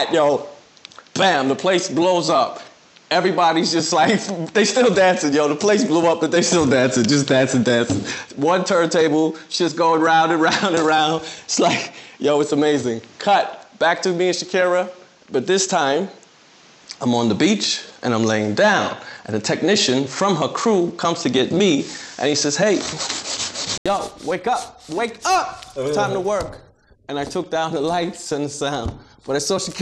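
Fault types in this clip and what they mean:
Input switched to a poorer device: capture likely ran on a lesser microphone or headset until 23.86 s. That leaves the sound dull, with nothing above 8 kHz, a few decibels off in level and faintly noisy, before it clears after an 80 ms gap.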